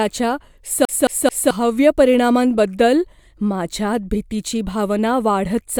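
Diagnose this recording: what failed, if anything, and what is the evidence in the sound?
CD stuck on one turn, from 0.85 to 1.51 s: a playback-stage fault in which the same 0.22 s stretch of speech plays three times, with a brief mute at each jump. A scratch kicks the laser back one track per disc rotation, producing the even skipping-disc stutter.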